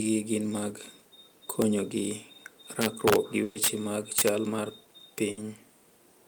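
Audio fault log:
1.62 s, 2.82 to 3.68 s, 4.19 to 4.29 s and 5.18 s, integer overflow: harsh, violent cracks on the loudest moments of the speech, far sharper than clipping. They are single snaps at 1.62 and 5.18 s and recur on peaks through the two longer stretches. The signal ran past the largest integer value and wrapped around to the opposite sign instead of being limited, so each peak jumped across the full range. Peaks went just to the limit at 1.62 s, about 2 dB over at 5.18 s, about 5 dB over from 2.82 s and about 7 dB over from 4.19 s.
3.43 to 3.57 s and 5.31 to 5.39 s, burst of packet loss: the sound stalls into a held, fading buzz or hiss, then resumes with a jump forward. At 3.43 s it lasts about 120 ms, inside the overflow stretch. At 5.31 s it lasts about 60 ms. A short run of packets arrived too late or not at all. The receiver stretched the last sound it had and faded it down, and the audio covered by the gap was skipped, not delayed.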